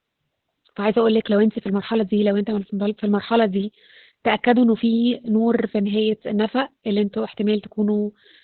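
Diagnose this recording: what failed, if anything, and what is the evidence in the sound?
The fault is at the codec stage and runs through the whole speech clip: heavy Opus voice compression in its SILK linear-prediction mode. The band stops near 4 kHz, so sibilants and consonant detail are gone, and the coarsely coded excitation makes the voice hoarse and faintly robotic. The depth of damage fits a bitrate around 8 kbps. A plain low-pass filter or narrowband phone line would muffle the sound the same way but leave the voice's texture clean.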